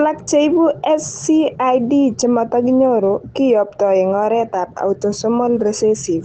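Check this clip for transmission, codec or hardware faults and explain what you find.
No transmission, codec or hardware faults are present in this speech. It has passed through a WebRTC call path, and the audio tops out around 8 kHz, which fits Opus at a modest bitrate working as intended.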